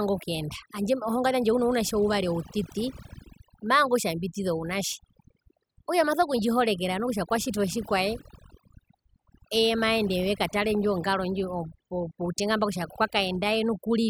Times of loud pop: none

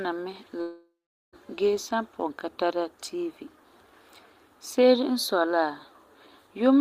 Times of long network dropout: 0.61-1.36

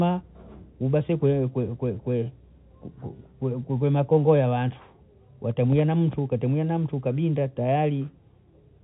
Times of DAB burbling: none

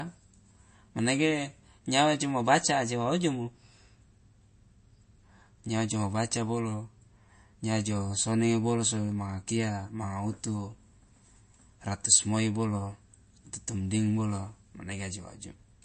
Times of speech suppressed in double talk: none

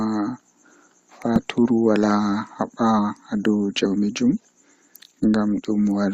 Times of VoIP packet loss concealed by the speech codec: none

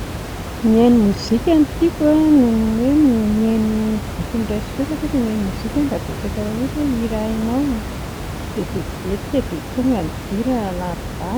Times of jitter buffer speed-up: none

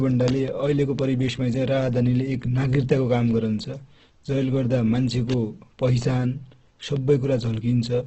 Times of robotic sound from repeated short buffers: none

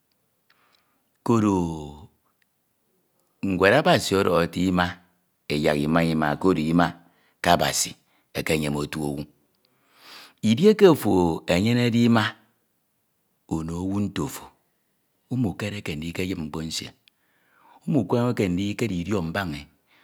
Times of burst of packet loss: none

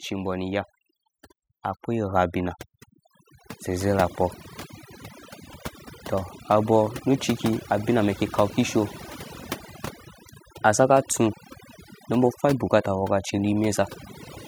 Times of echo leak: none

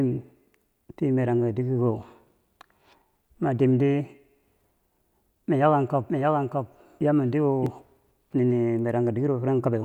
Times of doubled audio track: 6.08-7.66

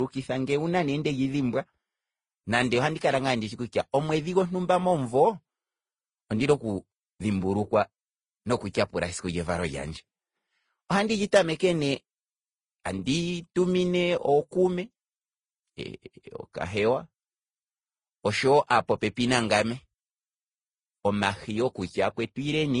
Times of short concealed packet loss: none

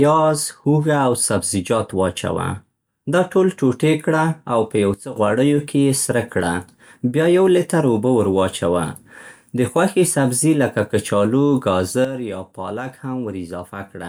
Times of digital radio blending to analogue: none

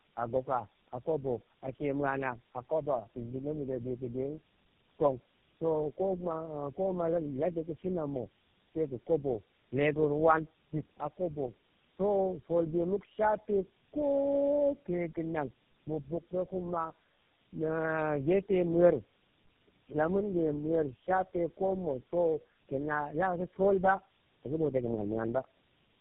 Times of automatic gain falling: none

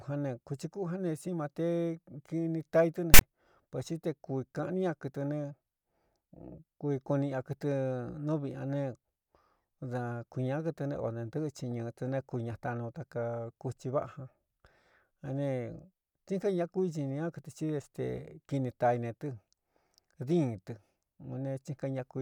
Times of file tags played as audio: 3.14-3.21

